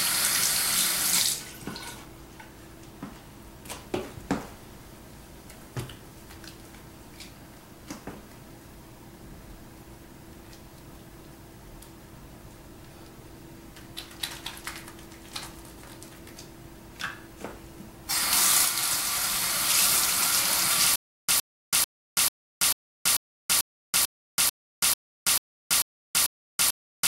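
From 20.96 s to the end, a short burst of about 0.11 s keeps coming back, each time followed by roughly 0.33 s of silence. It repeats 13 times at an even pace of one every 0.44 s. This is a stutter with silent gaps. The likely cause is a player or stream that stalled and, on each retry, replayed its last fragment before running dry. Whatever audio belonged in those final seconds is missing.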